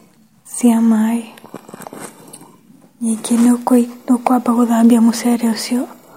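A stage in the chain was driven past its limit, so speech peaks were cut flat (hard clipping): about 1 dB over from 0.66 to 0.68 s, and about 2 dB over from 3.73 to 3.77 s. The flattened tops add high harmonics, heard as brief crackles on those peaks.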